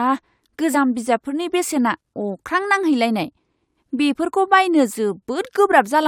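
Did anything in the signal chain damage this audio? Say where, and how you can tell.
Yes. The damage sits at the codec stage, where compressed frames were skipped at 0.73 s, just before "बिजाबफोरनि बेसेना अख्रां". About 20 ms of speech never plays, and the audio lurches forward by that much. On a waveform the speech envelope jumps abruptly. A spectrogram shows the harmonics breaking off and resuming misaligned, with a broadband mark at the seam.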